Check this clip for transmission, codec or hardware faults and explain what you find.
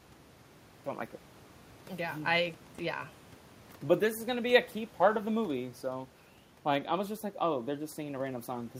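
No faults found; nothing heard in the speech points to a problem anywhere in the signal chain.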